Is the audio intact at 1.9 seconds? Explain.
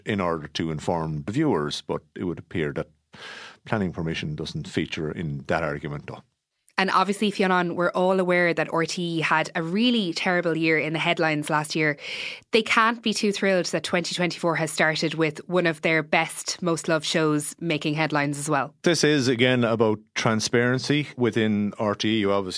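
Yes, at 1.9 seconds the speech plays through intact, with no dropout, glitch or other fault at that point.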